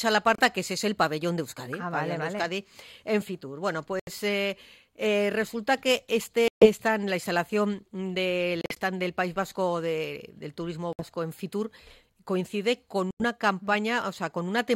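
Short, sharp silences at 0.35, 4.0, 6.48, 8.61, 10.93 and 13.11 s, each about 30 to 140 ms, are likely Bluetooth dropouts. Late packets were discarded, so the sound cuts out abruptly and resumes further along, as if it had kept playing. At 8.61 s the loss is split into several smaller holes. Each gap shows as a flat line on the waveform and a clean blank vertical band on the spectrogram.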